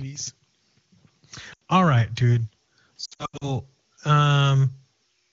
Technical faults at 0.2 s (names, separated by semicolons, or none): none